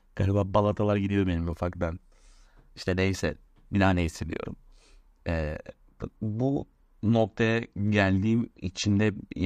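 From 6.12 s onward, an adaptive stream at a lower bitrate, consistent with 128 to 48 kbit/s MP3, abruptly brings a rise in codec artefacts. The waveform shows no gap.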